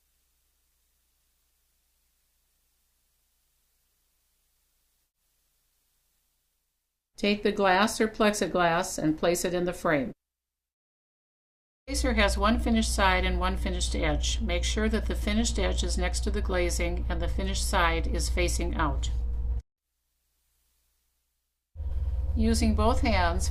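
No technical faults are audible.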